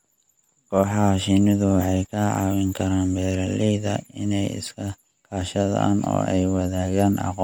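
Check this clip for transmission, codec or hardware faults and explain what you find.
One codec fault runs through the whole recording. It is Bluetooth LC3 compression, most likely. The speech has a plainly audible breathy, grainy edge from start to end. LC3 codes audio in short transform frames, and the damage here fits 10 ms frames at around 48 kbps. At that rate the coder drops parts of the upper spectrum and fills them with noise. Content stops at 20.2 kHz.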